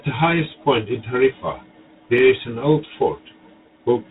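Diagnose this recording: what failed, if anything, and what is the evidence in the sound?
A harsh, rasping hiss rides on the speech throughout and rises and falls with its level, and nothing above about 3.8 kHz survives. This is G.726 ADPCM damage at the codec stage. The grain points to 24 kbit/s, where too few bits code each prediction difference.

At 2.18 s there is a tick or dip. A block of digital silence about 0.33 ms long cut the signal out and back with no fade, which fits a 16-sample buffer that the driver or buffer stage didn't fill in time.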